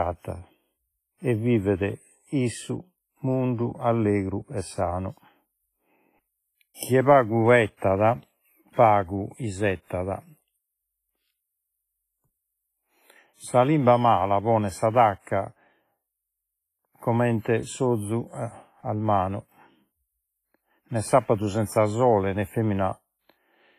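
Heavy WMA compression throughout likely squeezed the speech into a low bitrate, around 24 kbps. The result is ringing, washy hiss that breathes with the signal. From 7.77 to 7.82 s, just after "chie pagu", pre-echo spreads quantisation noise about 48 ms ahead of a sharp attack, so a brief hiss precedes it and softens its onset.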